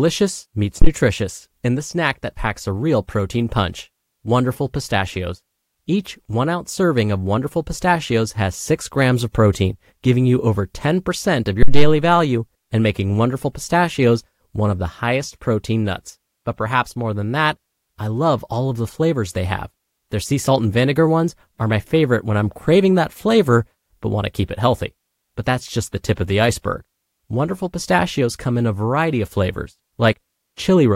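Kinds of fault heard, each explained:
Phantom power thump: a supply switched on or off at a live input pushes a voltage step through the coupling capacitors, giving a deep thump. Here it peaks at about -1 dBFS, at 0.82–0.89 s decaying within 16 ms, and at 11.63–12.04 s within 94 ms.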